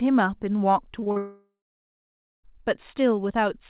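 From about 0.92 s to 1.18 s the speech breaks up with repeated packet loss, giving that robotic sound. Four short holes land in that quarter-second, the longest about 40 ms, and each gets papered over by stretching whatever sound came just before. That patching covers nearly 40% of the span, so the speech turns choppy, with small pieces simply gone.

Right at 1.18 s it gets worse, and the sound fits a long network dropout as the likely cause. Nothing real comes through until about 2.45 s, so roughly 1.26 s of speech is lost outright. The receiver briefly carries the last sound forward as a fading buzz or hiss, then gives up, leaving about 0.9 s of silence. When audio returns, the lost stretch isn't replayed. Everything sits under 4 kHz throughout, which fits a narrowband G.711-style call path.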